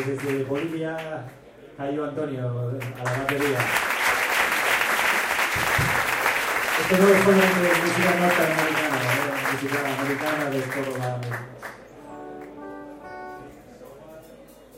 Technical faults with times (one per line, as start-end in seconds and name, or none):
none